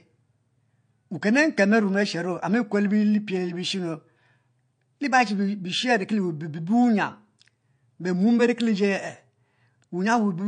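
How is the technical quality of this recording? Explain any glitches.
The technical quality is limited by one fault that runs through the whole recording. Throughout the speech, nothing is present above 9.4 kHz, so the top end sounds dull and closed in. This is likely low-bitrate audio saved at a high bitrate. An earlier MP3 encode, which fits around 48 kbit/s, removed the upper frequencies and left its artefacts. A later MP3 encode at a much higher rate kept that damage. It could not bring back the missing detail.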